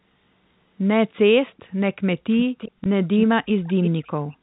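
From 1.47 to 1.63 s there's a very faint delayed copy of the speech, about 392 ms late. It comes back louder at 2.31–2.71, 3.17–3.23 and 3.45–4.08 s, trailing by 341 ms. That's echo leak, likely a loudspeaker at the far end whose echo canceller let some of its own pickup through. At 2.84–2.86 s, one lost 20 ms packet was filled by repeating the last one, which gives a small blip.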